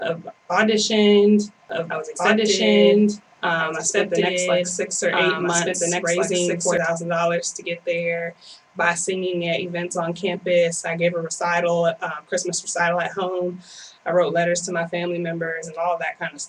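From 1.7 s to 6.78 s a second, full-band copy of the audio runs underneath the original, trailing it by about one and a half seconds and at roughly the same level, so everything is heard twice. The copy has no decay or room colour, and it cuts in and out abruptly. This is a doubled audio track, likely caused by the signal being captured again through a slower path, or by an edit leaving two out-of-step copies layered together.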